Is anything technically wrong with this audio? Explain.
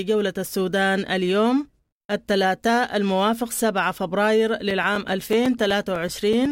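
Yes. From 4.71 s to 6.46 s the speech has periodic USB or driver dropouts: brief gaps recurring every 0.125 s, about eight per second, around fifteen in all. Something is stalling the USB bus or audio driver at a fixed interval, so each time a few milliseconds of audio never arrive and silence is substituted. The result is a steady train of ticks riding on the speech, audible only where the voice is present.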